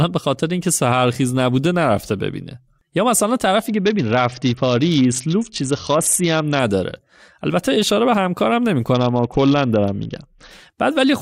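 Speech with two Bluetooth SBC bit pool drops, 3.68–6.60 s and 8.94–10.51 s: treble dulls and gritty noise rises, fitting a fall from bit pool 28 to 7 (about 66 kbps). A spectrogram shows the upper band abruptly emptying, then returning.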